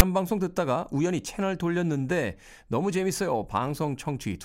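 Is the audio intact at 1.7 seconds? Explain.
Yes, the audio is intact at 1.7 seconds, with no dropout, click, distortion or other fault at that moment.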